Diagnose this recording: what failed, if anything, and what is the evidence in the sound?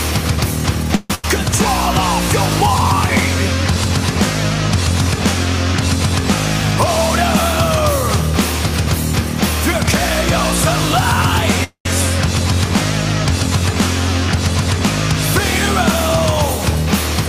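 Call audio freeze at 0.95 to 1.11 s and again at 11.64 to 11.86 s, network stage. In the first, the last sound is held as a fading buzz or hiss for about 142 ms. In the second, the fill lasts about 214 ms and decays to roughly 110 ms of silence. Each time the audio picks up exactly where it stopped, with nothing skipped and only added delay. This is likely packets stalling in transit while the jitter buffer drains, with the receiver stretching the last sound until delivery resumes.

Burst of packet loss at 1.15 to 1.24 s, also on the network path. The last sound is carried on as a decaying buzz or hiss for about 88 ms, then the audio resumes about 90 ms further along, so that stretch is gone rather than delayed. A short run of consecutive packets never arrived in time to play. Concealment extrapolated and faded the preceding sound to cover the hole, and playback then jumped ahead to the next packet that did arrive.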